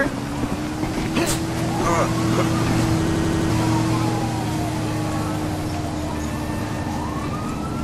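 From 3.07 to 3.50 s, a system hang loop: playback froze while the hardware kept replaying one 85 ms block, which fits a 4096-sample buffer, five times at 11.7 Hz. This gives a machine-gun stutter. Unlike a dropout, nothing falls silent, and about 0.4 s of sound is skipped.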